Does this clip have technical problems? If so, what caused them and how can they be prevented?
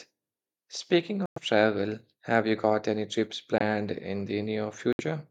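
Yes, corrupt frame muted: the speech cuts abruptly to silence at 1.26–1.38 s, before "travel have you got"; at 3.58–3.61 s, after "you got any trips"; and at 4.93–5.02 s. The decoder rejected damaged compressed frames and the player substituted silence. Error-protected transport with concealment prevents this.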